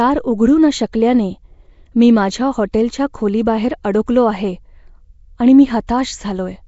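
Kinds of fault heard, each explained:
Nellymoser compression: The whole speech clip has a rough, hissy halo and a smeared, underwater quality. Nothing is heard above 7.7 kHz. This points to the old Flash microphone codec, likely at a low rate fitting 32 kbps. Starved bands get noise instead of detail.
Pre-echo: At 5.87 s, just after "आणि मी", a short hiss arrives about 17 ms before a sharp onset. The codec spreads its coding noise across a whole block. So the noise meant for the loud attack leaks into the quiet moment before it, softening the attack.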